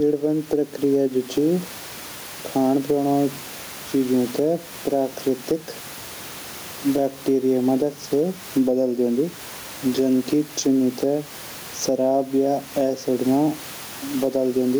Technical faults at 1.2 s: gain pumping

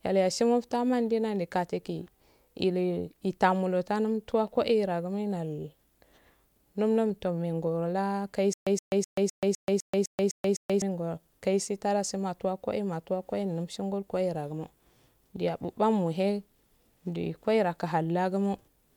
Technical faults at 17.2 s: none

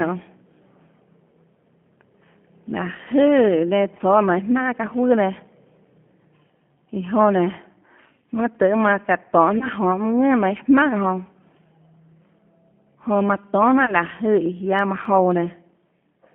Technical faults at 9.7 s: G.729 codec; VoIP packet loss concealed by the speech codec

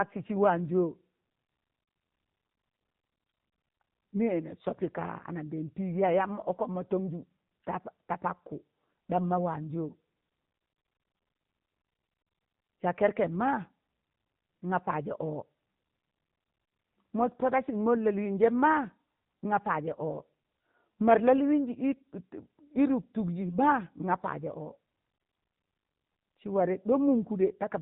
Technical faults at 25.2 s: AMR narrowband mobile codec

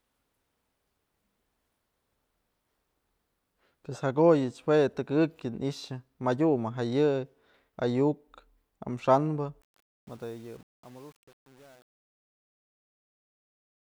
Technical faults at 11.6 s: truncation distortion on a fade

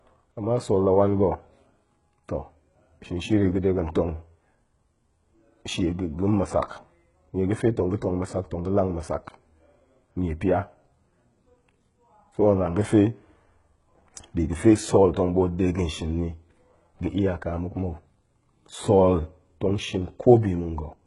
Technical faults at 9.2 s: HE-AAC compression

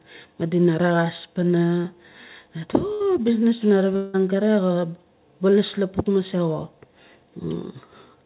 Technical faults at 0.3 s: none

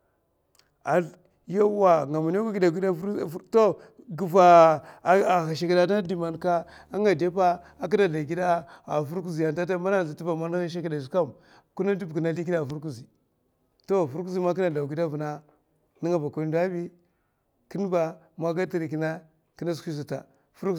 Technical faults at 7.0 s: video or display buzz

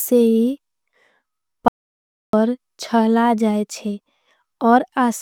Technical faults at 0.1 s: none

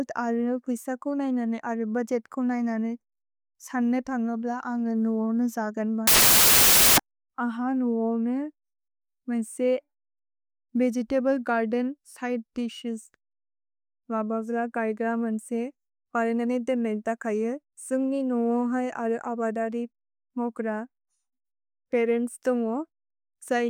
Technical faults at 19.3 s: none

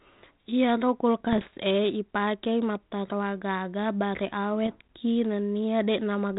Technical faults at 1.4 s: bit errors on an ADPCM link

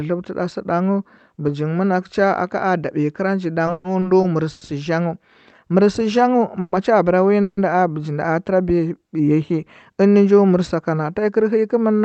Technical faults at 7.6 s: call audio freeze

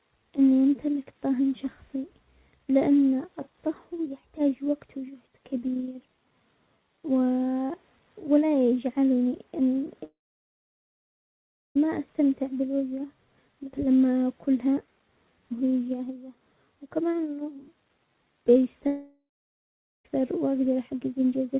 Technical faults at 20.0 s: long network dropout

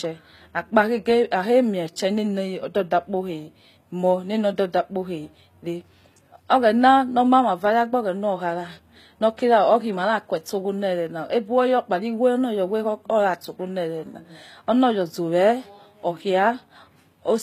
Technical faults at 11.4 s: HE-AAC compression

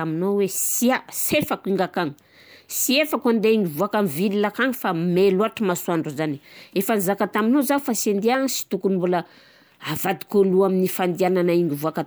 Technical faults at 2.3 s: none

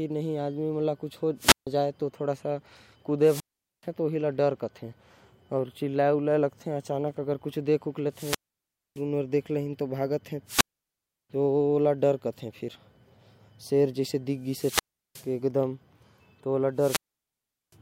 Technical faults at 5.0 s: none

